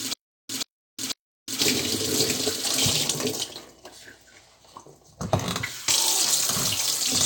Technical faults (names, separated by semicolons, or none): stutter with silent gaps